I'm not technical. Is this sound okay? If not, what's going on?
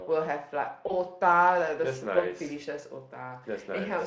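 No. Around 0.87 to 0.92 s there is VoIP packet loss concealed by the speech codec. About 20 ms of speech went missing, which fits one lost packet. Unlike a dropout's silence or click, the gap is filled with a short buzzy or noisy smear that lingers briefly.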